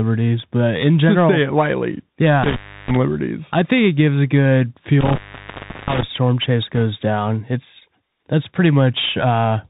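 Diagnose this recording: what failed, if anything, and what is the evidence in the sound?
Codec stage, Bluetooth CVSD headset codec: the speech is band-limited with nothing above 4 kHz, has scratchy sibilants and granular hiss, and fits 64 kbit/s CVSD. A spectrogram shows a hard ceiling at 4 kHz.

Analogue wiring, intermittent contact: the audio drops out at 2.43–2.96 s and 5.01–6.03 s, open for about 0.32 s and 0.72 s, with crackle at the edges. The waveform collapses to a faint noise floor between spiky boundaries.

Wireless link, bit errors on a Bluetooth voice link: a brief rushing crackle at 6.75–6.79 s comes from flipped delta bits at an error rate of roughly one or two percent. It shows as a short smear across the speech band, not sharp clicks.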